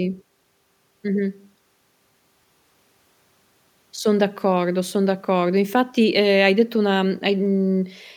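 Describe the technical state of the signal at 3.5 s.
At 3.5 s the speech signal is intact, with no audible fault at that moment.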